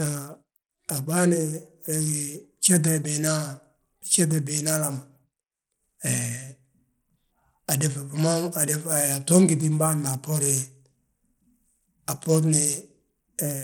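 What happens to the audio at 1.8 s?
At 1.8 s, as throughout, the speech sounds gritty with flickering, thin treble: likely Bluetooth SBC compression starving the upper sub-bands of bits, fitting roughly 96 kbps.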